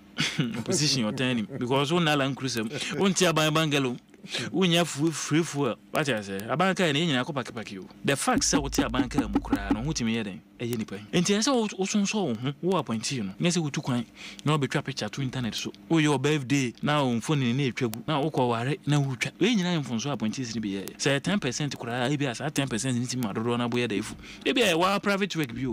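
From 0.15 s to the end, ticks recur about every 70 ms: word clock ticks, an unlocked receiver clock slipping one sample each time.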